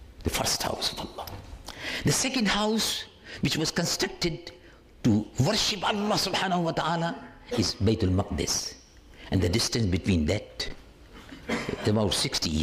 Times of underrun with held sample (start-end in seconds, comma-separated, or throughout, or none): 10.69